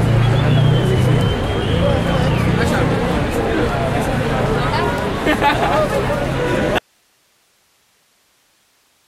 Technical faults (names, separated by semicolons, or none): audio dropout to a faint residue